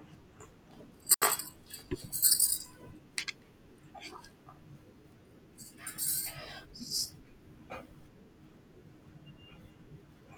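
A speech recording where the wireless microphone's radio link fades and the receiver's squelch mutes it, a wireless microphone squelch dropout from 1.12 to 1.22 s: brief static, then about 76 ms of near silence.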